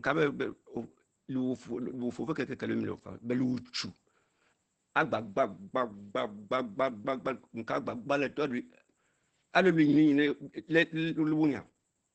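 Speech that sounds muffled and hoarse from start to finish, with nothing above about 8.8 kHz and a heavy, rough texture throughout. This is likely Opus compression at a very low rate, which fits about 12 kbps, where the encoder drops into its SILK speech mode with wideband audio.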